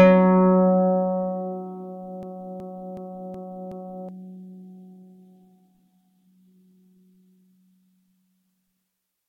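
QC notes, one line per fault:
2.23–4.09 s, system hang loop: a 372 ms slice of music repeats five times at 2.7 Hz, fitting a 16384-sample buffer recycled during a freeze, so about two seconds are lost.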